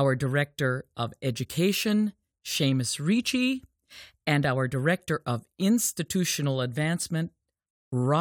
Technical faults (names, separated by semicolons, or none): none